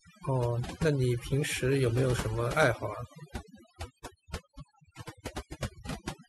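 Speech with overdone noise removal throughout: an aggressive noise reducer gates bands near its noise estimate, so pauses fall to near silence with twinkling specks. A spectrogram shows scattered isolated blips between words and ragged, hollowed-out harmonics.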